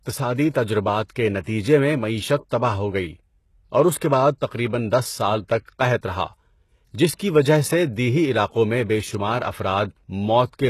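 Throughout the speech, the treble sounds gritty and metallic, with s sounds lisping and nothing above 12.3 kHz. This is likely HE-AAC compression, consistent with a bitrate around 16 kbps, rebuilding the top band by copying lower bands upward. At 0.50–0.54 s, just before "تجربات کے", at 1.09 s, at 1.40–1.46 s, between "تجربات کے" and "میں معیشت تباہ ہو", and at 2.49 s, before "تباہ ہو گئی", a brief hiss smears into the onsets. This is pre-echo: block-wide quantisation noise leaks ahead of each attack for 12 to 56 ms.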